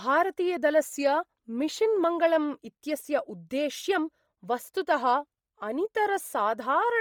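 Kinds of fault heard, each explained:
Bluetooth LC3 compression: The speech has a heavy breathy, grainy edge in the upper range. Fine detail there sounds replaced by hiss-like noise rather than carried cleanly. This is likely the LC3 codec of Bluetooth LE Audio at a low bitrate. It drops much of the upper spectrum and fills the gaps with noise. The damage fits a rate near 32 kbps and 10 ms frames. The band still extends to about 20.2 kHz.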